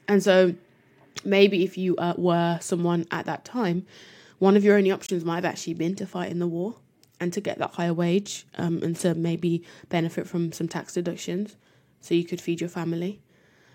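At 5.06 s, right after "one of your only", the sound drops abruptly into a 40 ms silence before "might have actually been": a corrupt frame muted, which fits a single damaged compressed frame being rejected and replaced with silence. The waveform shows a flat gap, the spectrogram a clean vertical blank, with timing preserved.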